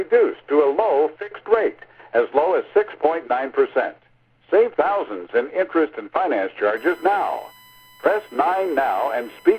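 A recording of sounds carries USB whine from 6.77 s to the end. It's a steady 1 kHz tone, loudest at 2 kHz, roughly 30 dB below the sound, leaking from USB bus current.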